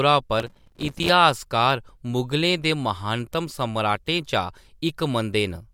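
From 0.40 to 1.09 s the speech carries processor overload crackle: the processor repeatedly failed to deliver its short buffers, around 3 ms each, in time, leaving dozens of hard-edged silent gaps that merge into a gritty tearing crackle until the load eases.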